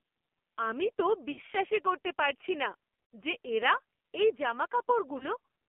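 Speech here has passed through the AMR narrowband mobile codec at a low-rate mode, and the heavy buzz fits a bitrate of about 5.9 kbps. The channel is limited to roughly 250 Hz to 3.4 kHz, so the voice loses its low body and all sibilance above that. The vocal tract model is fed very few pulses per frame, which gives the speech a coarse, synthetic, buzzy quality.

At 1.32 to 1.41 s, right after "আমি তো" and before "করতে পারছি না যে", lost AMR speech frames force the decoder to repeat its last pitch and filter settings at falling gain. The sound stretches into a brief smeared drone and dips before speech returns rough. The gap sounds like about 60 ms of missing audio, three frames' worth. The same failure occurs at 3.14 s, between "করতে পারছি না" and "যে এরা এই", as a similar drawn-out warble. At 5.18 to 5.26 s a shorter loss of about 20 ms, consistent with a single frame, produces only a quick dip.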